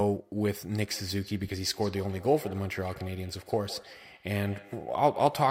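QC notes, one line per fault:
0.72–5.5 s, feedback echo between two devices: the speech comes back as a thin, ringing copy roughly every 150 ms, peaking about 17 dB below the direct sound. A second device in the room plays the call aloud, and the microphone picks it up again. That device's echo canceller only removes its own playback, so this loop passes through.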